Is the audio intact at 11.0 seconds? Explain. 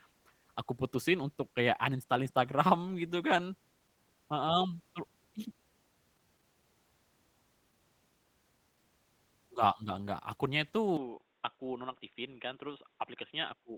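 No. From 10.97 s, just after "nya itu", the system likely switched its input to a poorer device, which passes nothing above about 3.8 kHz. The sound turns dull and boxy, drops about 5 dB, and carries a faint new noise floor, with no gap at the switch.

Over this stretch the audio also carries Opus voice compression at 16 kbps in hybrid mode with 20 ms frames. The coarsely coded excitation leaves the speech plainly muffled, hoarse and slightly robotic.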